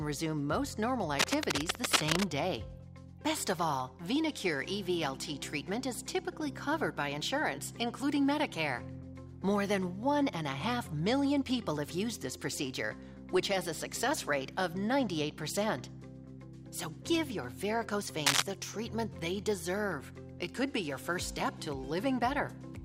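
From 1.19 to 2.24 s a burst of cable scratch noise sits over the sound at about the same level as the signal, heard as dense, uneven rustling and crackle. It returns briefly from 18.26 to 18.42 s, a few dB louder than the sound itself. The likely cause is a worn cable, connector or control being moved, its contact resistance fluctuating rapidly and injecting irregular noise bursts.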